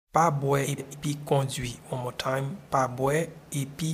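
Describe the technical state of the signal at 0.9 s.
Right around 0.9 s we're inside a frames out of order fault that runs from about 0.64 to 0.95 s. Two neighbouring blocks of about 139 ms each got decoded in swapped order, so that stretch plays back-half first, then front-half. You hear it as a garbled little flutter. The timing isn't shifted, since nothing's lost.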